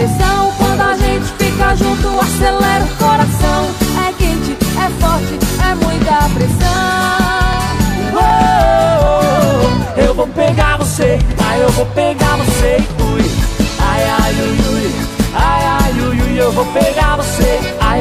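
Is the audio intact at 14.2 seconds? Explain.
No, 14.2 s falls inside a run of clock drift buffer slips from 0.60 to 17.54 s: regular clicks every 0.77 s, likely from mismatched device clocks dropping or repeating small sample blocks.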